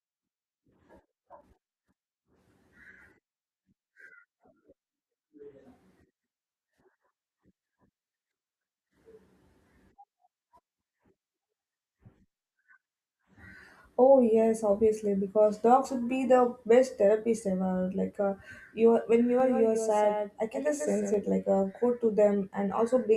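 A second copy of the speech is likely being mixed in from a slower capture path or a misaligned edit, producing a doubled audio track from 19.40 to 21.14 s, just after "when you". The copy trails the original by roughly 150 ms at about 5 dB lower, full-band and dry, with no decay or room colour, so the speech smears into a hard slapback echo that switches on and off abruptly at both ends.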